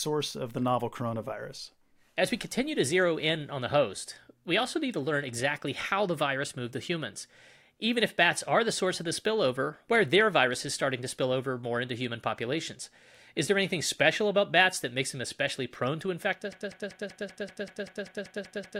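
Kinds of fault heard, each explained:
Broken-record loop: a 0.19 s fragment repeats exactly twelve times from 16.5 s to the end, likely a stalled stream; unlike echo, no new speech follows.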